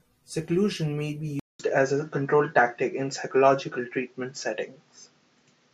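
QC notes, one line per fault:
1.40–5.73 s, input switched to a poorer device: likely a device change after "may be"; a 200 ms gap, then dull audio capped at 7.6 kHz, level shifted about 5 dB, faint new noise.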